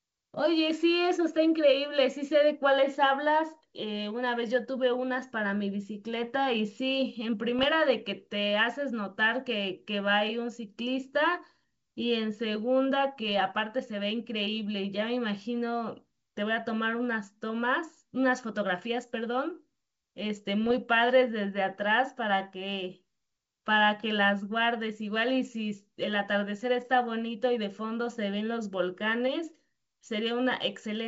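Speech with three short bursts of popping and rough crackle, 7.59 to 7.63 s, 13.28 to 13.38 s and 20.64 to 20.79 s: bit errors on an ADPCM link, a few tenths of a percent, upsetting the G.722 decoder's predictor.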